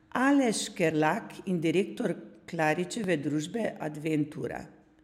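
A short speech clip with two distinct faults. At 0.90 s there is a brief glitch caused by damaged data in a compressed stream: corrupted bytes make the decoder misread the frame, lose sync and resume at the next valid frame header. At 3.04 s a small click-stutter comes from overlapping chunks. The audio appears to have been handled in 2-second blocks, and at this join the new block begins before the previous one finished, so about 6.5 ms of sound plays twice.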